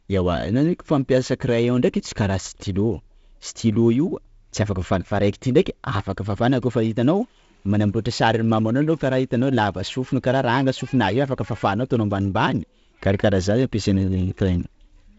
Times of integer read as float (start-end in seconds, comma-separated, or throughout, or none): none